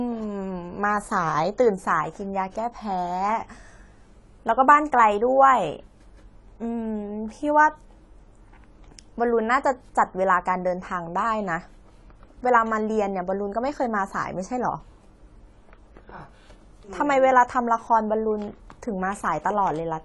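Speech sounding dull and smeared from start to finish, with nothing above 11.5 kHz and a warbling, fizzy edge on sibilants and held sounds. The likely cause is AAC compression, with AAC-LC dropping and coarsely quantising high frequencies at a low rate that fits around 32 kbps.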